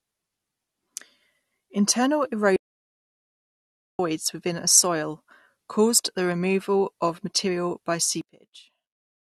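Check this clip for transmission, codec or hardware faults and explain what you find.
Two faults stand out in this speech clip: a stretch of dead silence and a late collapse in level that points to polarity trouble.

From 2.56 to 3.99 s there is an audio dropout to silence, losing about 1.43 s just before "within a soil caused". The gap is silent with no room tone, unlike a natural pause or noise gate. Likely the input feed was lost while the recorder kept writing empty samples.

From 8.21 s to the end, right after "removal of material by", one channel is inverted. Summed to mono, the centred speech cancels and drops about 20 dB, leaving a faint residue. Unlike a dropout, the sound fades to a faint ghost rather than stopping. The likely cause is reversed polarity on one stereo leg.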